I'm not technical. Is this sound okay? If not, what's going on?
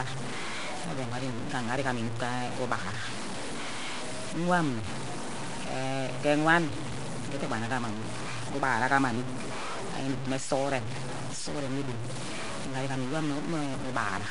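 No. Across the whole clip the speech is buried in a gritty, grainy hiss nearly as loud as the voice itself. That is likely low bit depth without dither: the sound was stored with very few volume steps, about five bits, and simply chopped off, so the roughness follows every syllable.

On top of that, the speech sounds smeared and underwater, with a rough, hissy halo and nothing above about 10.6 kHz. That points to Nellymoser compression, the old Flash microphone codec, which starves weaker frequency bands and fills them with noise. Its damage is plainly audible throughout.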